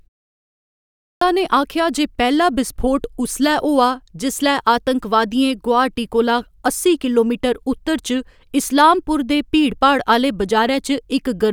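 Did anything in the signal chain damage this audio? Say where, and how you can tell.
Yes. The damage is at the playback stage, a clipped start after a pause. After about 0.93 s of silence, the output device was still waking or relocking when speech resumed, so the first 0.28 s or so, from 0.93 to 1.21 s, never reached the output. The speech bursts in abruptly, missing its opening sounds. On a waveform, speech energy jumps straight out of flat silence at 1.21 s with no rising onset. A spectrogram shows a hard vertical edge there instead of a gradual build.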